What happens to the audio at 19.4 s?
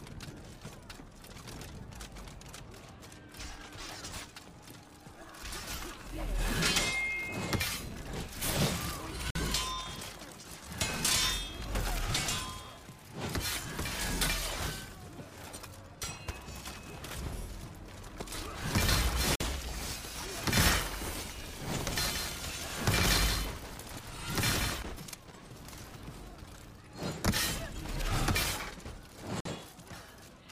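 At 19.35 to 19.40 s the sound drops out completely for 50 ms, a gap between chunks. The audio was split into blocks, which fits a 10-second chunk size, and silence was inserted at the join instead of the next block following on immediately. Nothing is missing; the sound simply stops and resumes, giving a short hole with abrupt edges. On a waveform it is a flat near-silent strip with square ends, and on a spectrogram a clean vertical blank band across all frequencies.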